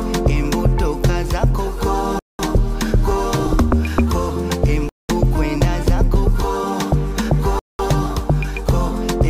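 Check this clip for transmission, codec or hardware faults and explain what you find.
One fault runs through the clip. Gap between chunks at 2.19–2.39 s, 4.89–5.09 s and 7.59–7.79 s: the audio arrives in 2.5 s blocks, and each join is padded with 200 ms of silence. Nothing is dropped, but the sound is interrupted three times, leaving short holes every 2.7 s.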